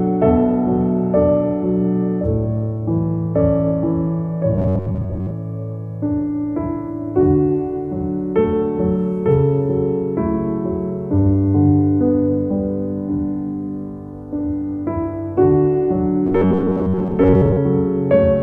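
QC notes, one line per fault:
4.55–5.33 s: robotic sound from repeated short buffers. A rigid metallic buzz near 94 Hz replaces most of the audio, likely from a roughly 10.7 ms buffer being replayed in a loop.
16.27–17.58 s: robotic sound from repeated short buffers. The same fixed 94 Hz buzz returns for about 1.3 s, likely because that short chunk repeats while fresh audio is skipped.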